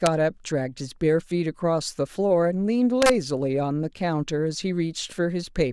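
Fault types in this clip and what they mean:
Integer overflow: peaks in the speech pass the largest integer value and wrap to the opposite sign instead of being limited, cracking sharply at 0.06 s and from 3.02 to 3.10 s, about 2 dB over there. The waveform jumps abruptly between opposite extremes, and the spectrogram shows bright broadband vertical streaks.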